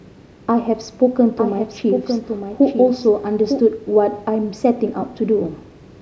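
A doubled audio track runs from 1.38 to 3.60 s in this speech clip, most likely because the same signal reached the mix twice, once through a path running about a second slower. The late copy sits around 5 dB below the original and keeps the full bandwidth, with no decay or room colour. It cuts in and out abruptly at those times, so the speech overlaps a flat, dry repeat of itself from a second earlier.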